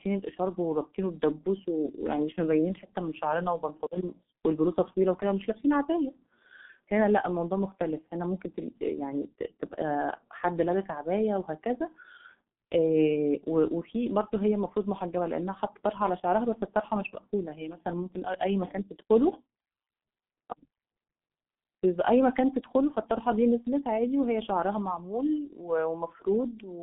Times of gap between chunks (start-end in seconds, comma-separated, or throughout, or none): none